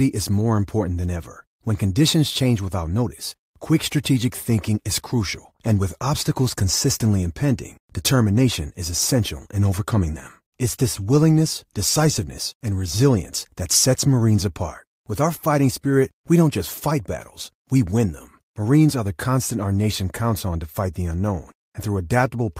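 No technical faults can be heard anywhere in the recording; the signal stays steady and intact throughout.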